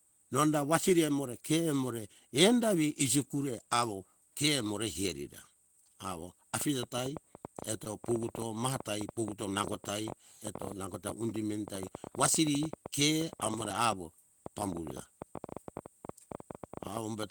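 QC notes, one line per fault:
6.61 s to the end, train of clicks: right after "herira awo" a ticking starts and runs all the way out, roughly ten clicks a second at an uneven pace. Each pop has much the same shape and sits well above the speech, around 10 dB hotter, so it's obvious in pauses too. Likely an outside source, such as interference from nearby gear or a faulty connection or power supply, rather than anything in the recording itself.
7.33–7.96 s, repeated stalls (stutter): the speech catches four times in about 0.6 s, each a brief hold where the last bit of sound gets stretched, about 53 ms stretched in total, the longest hold 19 ms, roughly 9% of that stretch. Nothing actually drops out; it just drags. That pattern points to packets arriving late, with the jitter buffer running dry and the receiver padding until data caught up.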